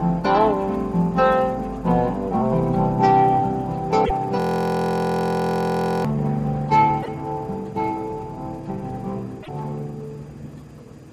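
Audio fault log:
4.04–4.11 s, 7.02–7.08 s, 9.42–9.49 s: broken MP3 bit reservoir. Each is a brief garbled glitch of about 70 ms where the audio skips ahead. The likely cause is cut MP3 frames, so the following frames decode from the wrong borrowed bytes.
4.40–6.05 s: system hang loop. A steady buzz at 43.1 Hz as one 23.22 ms snippet repeats 71 times. This fits a 1024-sample ring buffer replaying while the system froze.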